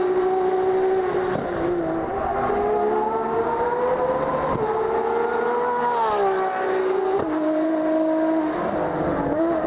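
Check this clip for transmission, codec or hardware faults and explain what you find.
Nothing above 4 kHz comes through, which fits a G.711 mu-law call path at 64 kbps, and that narrowband ceiling is the expected character of the link rather than a fault, with no transmission, codec or hardware faults to report.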